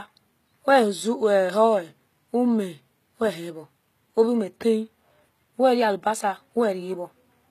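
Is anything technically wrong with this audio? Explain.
Yes. Throughout the speech the treble has that rebuilt, plainly gritty quality typical of HE-AAC compression, most likely. Top end is copied up from lower bands, so harmonics don't line up and s sounds go metallic and lispy; nothing sits above 14.9 kHz, which fits roughly 20 kbps.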